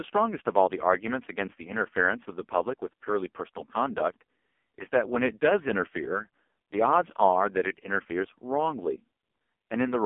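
From start to finish the speech runs through an AMR narrowband mobile codec, and it's heavily squeezed. Everything sits in a phone-line band of roughly 250 Hz to 3.4 kHz, with nothing at all above 3.4 kHz. The codec rebuilds the voice from a vocal-tract model fed by sparse pulses every few milliseconds, so at this damage level it comes out buzzy and synthetic, which fits one of AMR-NB's lowest modes, around 5 kbps.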